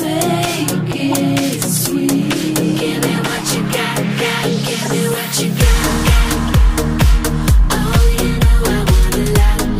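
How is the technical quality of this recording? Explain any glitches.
The recording has four brief glitches, all of the same kind: corrupt frame decoded. Damaged bits in compressed frames reached the decoder, which played them anyway, so misread gains and codes put energy at the wrong frequencies. Each is a short chirp or burst of noise lasting roughly one or two frames: at 1.11–1.14 s and 4.82–4.88 s, peaking around -10 dBFS, and at 2.45–2.47 s and 6.48–6.50 s, quieter at around -15 dBFS.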